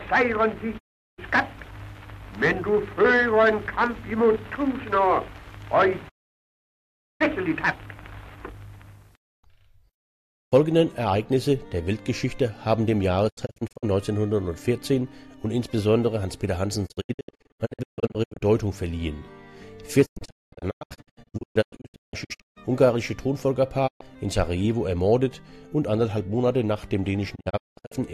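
Digital broadcast dropouts occur at 0.77–1.20 s, 6.08–7.22 s, 9.94–10.53 s, 13.28–13.85 s, 16.85–18.43 s, 20.05–22.58 s, 23.86–24.02 s and 27.34–27.96 s. Each time, the receiver stopped getting usable frames and muted, fading down in 20 ms. The sound returns only when good frames resume, and whatever was broadcast in the gap is gone. At 13.28, 16.85, 20.05 and 27.34 s the losses come as clusters of short holes, the longest 0.22 s. These gaps fit 24 ms frames.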